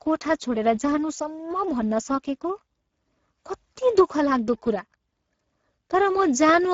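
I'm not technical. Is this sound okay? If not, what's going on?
No. Throughout, the speech carries Speex codec damage. This older voice-chat compressor rebuilds speech from a simplified model, and here it has too little data, so the voice sounds noisy and hoarse. Nothing above 7.6 kHz remains, which dulls the top end.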